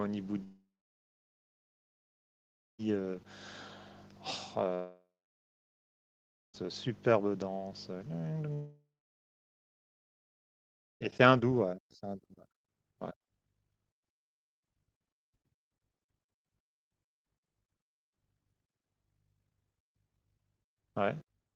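From 0.43 to 2.80 s, 4.75 to 6.64 s and 8.53 to 11.02 s, speech stops in three long network dropouts, likely lost packets. A brief fading buzz precedes roughly 1.5 to 2.2 seconds of flat silence, seen as empty spectrogram columns and a flatlined waveform each time.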